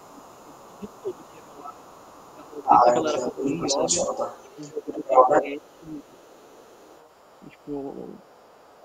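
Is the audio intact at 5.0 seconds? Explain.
No. At 5.0 s the speech sits inside a dip from 4.71 to 5.14 s, which is speech suppressed in double talk. The talker's level falls by up to roughly 15 dB across about 0.4 s while the far side is also audible. The likely cause is an echo canceller that could not separate the talker from loudspeaker echo and attenuated both. On a waveform this shows as a sudden narrowing of the envelope, and on a spectrogram as a fading band.

The same moment also carries the other side's voice leaking through. This is a second voice present from 0.0 to 8.8 s at roughly the same level as the talker. The likely cause is a loudspeaker picked up by the microphone and not fully cancelled. At 5.0 s it overlaps the suppressed speech and can sound thin or choppy. A spectrogram would show two interleaved sets of harmonic striations, and the waveform would stay filled where the talker dips.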